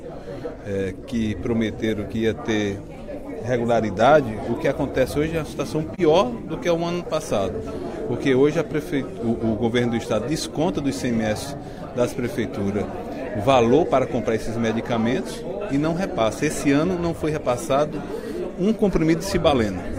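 The audio has a brief dropout from about 5.94 to 6.00 s, a short dip of about 43 ms. It's AAC frame loss with muting, consistent with a single lost frame: the decoder zeroed that frame's spectrum, so the overlapping windows fade the sound out and back in.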